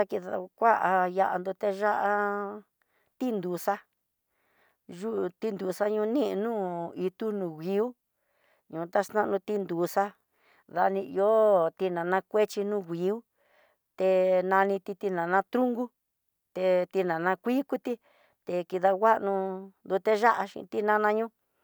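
No technical faults can be heard anywhere in the recording.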